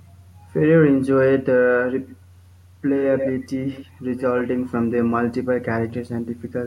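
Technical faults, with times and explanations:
2.08–2.16 s, 3.02–3.48 s, 3.69–3.89 s and 4.17–4.23 s, echo leak: a second copy of the speech trails 119 ms behind. It is faint, but nearly as loud as the speech at 3.02–3.48 s. Likely an echo canceller missing loudspeaker pickup.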